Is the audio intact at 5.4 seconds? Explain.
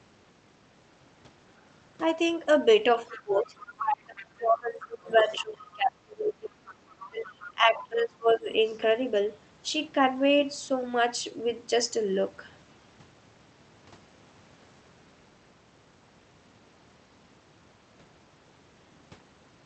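No. At 5.4 s the speech sits inside a stretch from 2.96 to 6.6 s where it dips and thins, at its deepest falling around 25 dB. This is likely speech suppressed in double talk: with both sides talking, the echo canceller could not separate its talker from loudspeaker echo and turned both down.

Over the same moment, from 4.8 to 5.76 s, a second, fainter voice comes through, roughly 20 dB below the talker. This is likely the other side's voice leaking through: the echo canceller left part of the loudspeaker playback in the microphone signal.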